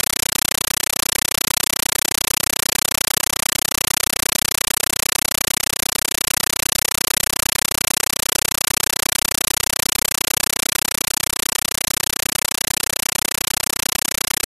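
From the first moment to the end, the speech is replaced by harsh, very loud chattering static: a compressed stream played as audio. The player passed AC-3 data to the output as if it were ordinary samples instead of decoding it. Each frame is a noise burst of about 9.3 ms followed by silent padding, repeating 31.25 times a second, which fits a Dolby Digital stream at around 448 kbps. That steady frame rhythm separates it from random digital crackle or clipping.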